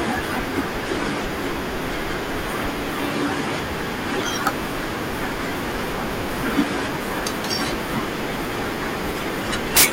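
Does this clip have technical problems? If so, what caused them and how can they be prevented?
Yes. Integer overflow at 4.47 s and from 9.77 to 9.85 s: loud speech peaks exceeded the largest integer value and wrapped to the opposite sign instead of being limited. The first peak only just reached the limit and gives a single crack. The second was overdriven by about 17 dB and gives a burst of harsh cracks. Using saturating arithmetic or clamping, with headroom before gain stages, prevents it.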